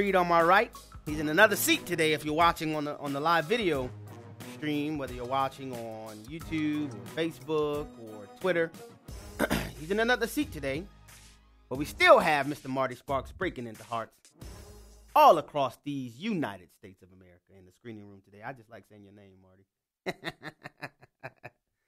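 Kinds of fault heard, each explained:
No faults can be heard anywhere in this recording.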